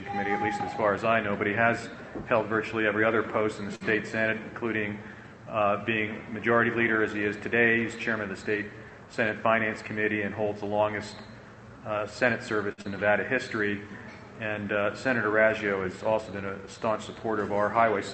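A short stall from a late packet comes first, at 3.75 to 3.84 s. A packet missed its playout time and the jitter buffer ran dry, so the receiver held the last sound for about 53 ms until the data arrived, then resumed exactly where it left off. Nothing is lost. Instead a sound drags on slightly too long with a faint buzz or dip, and everything after it plays about 53 ms later.

A jitter buffer speed-up runs from 9.06 to 9.63 s. The buffer had built up more audio than its target, so the receiver trimmed it back by cutting out tiny pitch-period-sized slices one after another, removing roughly 50 ms in total. Over that stretch the sound plays at about 107% speed with its pitch unchanged, giving a brief hurried, pressed-forward quality.

A second short stall from a late packet follows at 12.72 to 12.81 s. Again the buffer emptied and the last sound was stretched, this time for about 57 ms, before playback picked up from the same point. 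It is heard as another held moment with a slight buzz or dip that adds about 57 ms of delay.

A short concealed packet loss comes almost immediately after, at 12.82 to 12.87 s. Here about 40 ms of audio never reached the decoder in time and was simply gone. The receiver covered the hole with about 25 ms of synthetic continuation of the preceding sound, then crossfaded back into the real signal. The result is a quick smear or wobble.

Throughout, the Opus call path band-limits the audio at 8 kHz, removing the high frequencies above that point across the whole clip.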